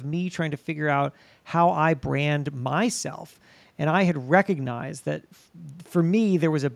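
No audible faults anywhere.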